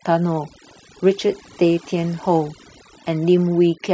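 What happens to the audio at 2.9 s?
At 2.9 s the speech is still under the overdone noise removal that runs through the whole clip. An over-aggressive noise reducer cuts individual frequency bands whenever they approach its noise estimate, taking quiet speech detail with them. The background drops and breaks up into twinkling specks.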